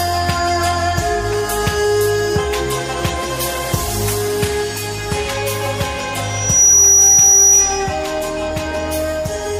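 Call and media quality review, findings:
Loudspeaker feedback squeal, 6.23–7.97 s. Single tone near 5.8 kHz, swells over roughly 0.4 s to around 10 dB above the sound. Mic picking up its own speaker; loop gain above unity at that frequency, tone self-reinforces until amplifier limits it or loop breaks.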